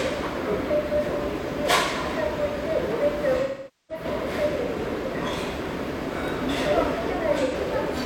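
AAC frame loss with concealment at 3.42–4.04 s and 7.43–7.54 s: missing frames are refilled from the last good spectrum. The first fades into a smeared, decaying gap with blurred spectrogram columns; the shorter one is a brief noisy patch.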